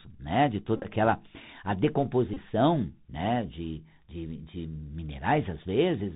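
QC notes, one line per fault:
Throughout: Bluetooth CVSD headset codec. The speech is plainly damaged by narrowband headset coding, consistent with a 64 kbps CVSD link. Nothing above 4 kHz survives, so the voice is dull and boxy. The one-bit encoder tracks only up or down with an adapting step. Loud high-frequency sounds outrun that step and distort, s sounds turn scratchy, and a granular hiss sits under the speech.
0.76–0.87 s: Bluetooth headset packet repeated, between "né de" and "aquela a". About 52 ms of audio is lost, scattered over 83 ms, which fits roughly 14 dropped packets. The decoder replays the last packet's bits in place of each lost one. During the longest run, around 20 ms, the repeat every 3.75 ms forms a short buzz near 267 Hz.
2.34–2.36 s: Bluetooth headset packet repeated. About 26 ms is replaced by repeated packet data, pointing to about 7 lost packets in a row. The 3.75 ms repetition gives a brief buzz near 267 Hz before good packets return.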